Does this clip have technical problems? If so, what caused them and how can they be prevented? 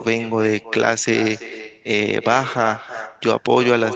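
Yes. This is echo with no canceller: the far end's microphone picked up its own loudspeaker, so every phrase returns about 13 dB quieter, roughly a third of a second later. Turning on acoustic echo cancellation at the far end, or having that listener use headphones, prevents it.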